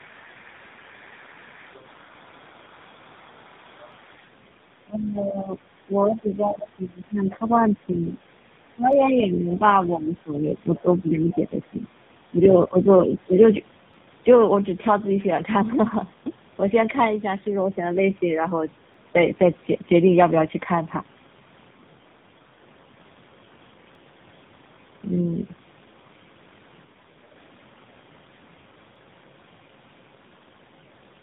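Throughout the recording, tandem speech coding is at work: the call passed through two separate speech codecs in a row, with the second re-encoding the first one's already damaged output. The rough, warbly texture and the total absence of anything above 3.8 kHz fit a GSM full-rate leg feeding an AMR-NB coder at a low rate of around 8 kbit/s.

At 3.92 s, and again at 8.93, 13.94, 18.94, 23.95 and 28.96 s, overlapping chunks appear. The audio was handled in 5-second blocks that each began slightly before the previous one ended, so about 7 ms is replayed at every join. Each repeat is heard as a brief tick or stutter.

From 4.85 to 5.62 s the speech is suppressed, most likely because of double talk: the echo canceller probably mistook this talker for loudspeaker echo while both sides spoke at once. The level sinks by about 15 dB at its deepest, over roughly 0.7 s of audio.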